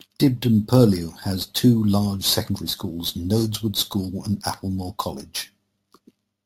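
Throughout the speech, imaging from sample-and-hold upsampling adds a bright, metallic fizz that rises and falls with the voice. Samples were repeated without smoothing, which fits 16 kHz audio raised to 44.1 kHz. Mirrored copies fill 8 to 16 kHz, about 17 dB down.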